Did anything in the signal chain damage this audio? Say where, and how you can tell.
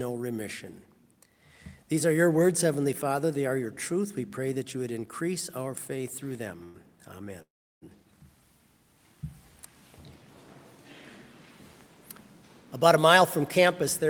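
Yes, the damage happened at the network and call-receiver stage.

Call audio freezes occur at 6.63 to 6.76 s and at 7.42 to 7.84 s. In the first, the last sound is held as a buzz or hiss for about 0.1 s. In the second, it stretches for 0.4 s and fades to silence for most of that time. Afterwards the sound resumes exactly where it stopped, with nothing skipped. The likely cause is packets delayed in transit that left the jitter buffer empty, so the receiver filled the wait and the delay grew by the same amounts.

A jitter buffer speed-up runs from 12.76 s to the end. The sound plays about 6% fast at unchanged pitch and feels slightly hurried. With extra delay now built up in the buffer, the receiver trims short pitch-period slices again and again to catch up, removing roughly 70 ms in total. That removal of whole pitch periods, without any pitch shift, is what gives the speed-up away.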